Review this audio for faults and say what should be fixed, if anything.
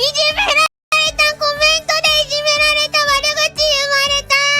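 There's a playback stall from 0.66 to 0.92 s: the sound cuts out for 260 ms mid-flow, then carries on. That's likely the player starving for data or its thread getting blocked. A bigger playback buffer and a higher-priority audio thread should stop it.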